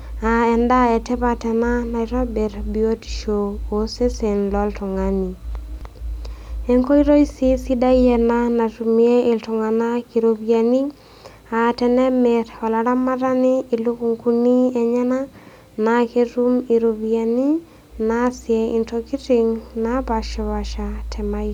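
No technical faults are audible.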